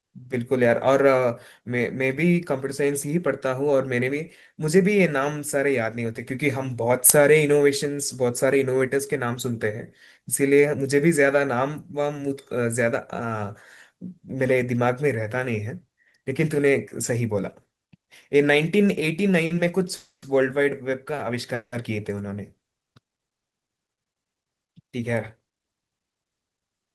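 The clip is speech with three kinds of network playback fault, all in its last third. At 19.45 s to 19.52 s there is a short stall from a late packet. A packet came in behind schedule and the jitter buffer ran dry. The receiver held the last sound for about 50 ms, giving a brief drawn-out moment with a slight buzz or dip. Then the audio resumed from the same point. Nothing is lost. Everything after it simply runs 50 ms later. Two call audio freezes follow, at 19.96 s to 20.24 s and at 21.54 s to 21.74 s. Each is likely caused by packets held up in transit, emptying the buffer. In the first, 260 ms is filled in. The held sound fades into about 120 ms of silence. In the second, 180 ms is filled, including about 80 ms of silence. Playback picks up where it stopped, so gaps are inserted but no audio is missing. Then come two jitter buffer speed-up passes, at 23.62 s to 24.01 s and at 24.87 s to 25.97 s. 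The buffer had built up too much audio after the delays. So the receiver trimmed many tiny pitch-period-sized slices to catch up. The first stretch plays at 112% speed and sheds around 50 ms. The second plays at 108% and sheds around 100 ms. Pitch stays the same, but the delivery sounds rushed.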